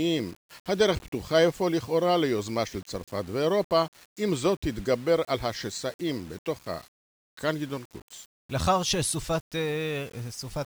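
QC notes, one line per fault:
throughout: low bit depth without dither, speech-following grit, likely from 7-bit rounding; waveform shows stair-steps, spectrogram signal-shaped hash roughly 25 dB down.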